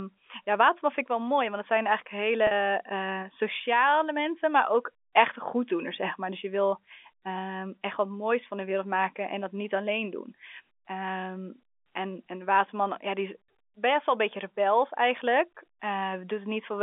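At 2.47 s there's a packet loss with pitch repetition. About 40 ms of speech went missing, which fits four 10 ms packets, and the receiver looped the last pitch period to cover it until 2.51 s. It's a brief, slightly held buzz on the telephone-band line.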